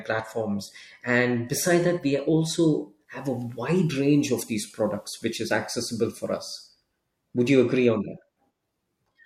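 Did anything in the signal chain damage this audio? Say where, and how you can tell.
Yes. The damage happened at reception, before capture: a digital radio blending to analogue. From 3.04 s, just after "beside that we also", the receiver loses its digital stream and cross-fades over about 200 ms to the FM broadcast of the same station. It returns to digital at 6.56 s. During that stretch, hiss rises to roughly 40 dB below the speech. The level shifts by about 1 dB.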